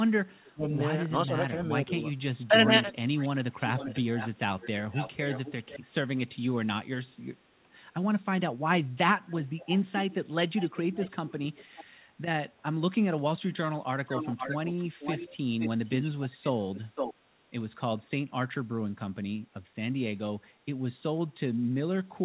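Early on, the speech dips at 0.43 to 0.72 s (a drop of about 20 dB), then at 1.27 to 1.94 s and 2.48 to 2.72 s (about 10 dB each). That's likely speech suppressed in double talk, with the echo canceller ducking the talker while the far side spoke.

From 2.84 s there's a delayed repeat of the voice: 2.84 to 3.29 s and 3.69 to 5.8 s (about 0.49 s behind), 9.28 to 10.15 s and 10.57 to 11.84 s (about 0.57 s), and 14.09 to 17.14 s (about 0.51 s). It runs about 25 to 10 dB under the speech and is loudest in that last stretch. That's likely an echo leak from a loudspeaker end whose canceller let some of its mic pickup back through. The whole call is cut off above 4 kHz, as G.711 is.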